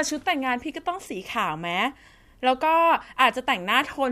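No technical faults are audible.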